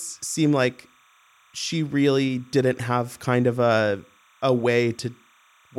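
Timecode bleed runs through the whole speech clip: linear timecode at 30 frames per second has leaked in from a neighbouring track or cable. Its square wave flips between roughly 1 kHz and 2 kHz, giving a faint chirping warble well below the voice, around 35 dB down.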